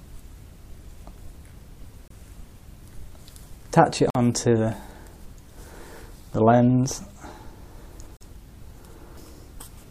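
At 2.08 s the sound drops out for about 26 ms, a gap between stream segments. The time stamps of two adjacent segments do not meet. The player fills the hole with silence. The edges are hard and abrupt. At 4.10 s a longer hole of about 49 ms follows. At 8.17 s another lasts about 41 ms. The holes fall near two-second boundaries, which fits two-second segments. Nothing is lost; the silence is inserted.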